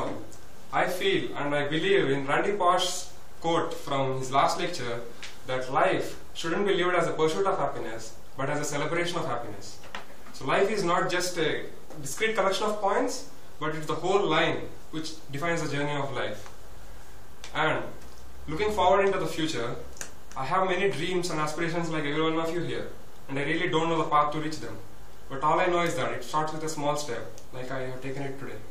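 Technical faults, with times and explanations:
Throughout: DC offset. The waveform sits shifted from zero by about -33 dBFS. It is inaudible, but it takes up headroom and adds steady energy at 0 Hz.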